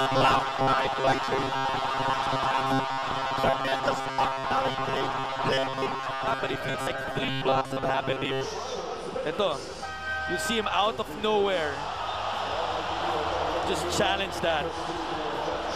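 Robotic sound from repeated short buffers runs from 0.01 to 8.46 s: a rigid, metallic buzz at 134 Hz that only loosely tracks the underlying sound. Likely cause: audio arriving too seldom, so roughly 7.5 ms fragments are replayed while much of the real signal is skipped.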